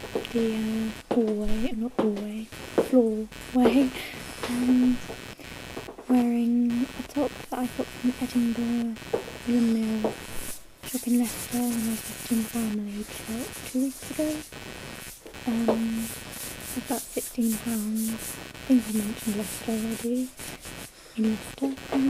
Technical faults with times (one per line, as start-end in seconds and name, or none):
0.00-22.09 computer activity noise